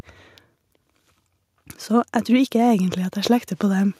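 Speech clip with automatic gain rising from 1.55 s to 3.95 s: the gain control judged the input too quiet and eased it up about 3 dB, so voice and background swell together.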